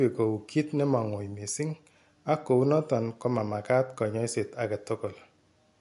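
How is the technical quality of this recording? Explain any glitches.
The recording is noticeably degraded throughout, with a dull, band-limited sound and audible compression damage from start to finish. Nothing reaches above 11.3 kHz, so the top octave is missing and sibilants lose their crispness. The speech also has a watery, swirling texture, and its consonant onsets are smeared. This is likely MP3 compression at a low bitrate, the damage fitting roughly 52 kbps. Short on bits, the encoder cuts the treble at a fixed frequency and discards quieter spectral detail that flickers in and out between frames.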